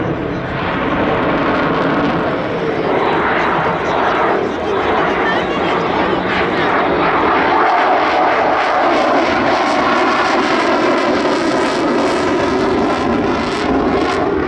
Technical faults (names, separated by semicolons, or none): none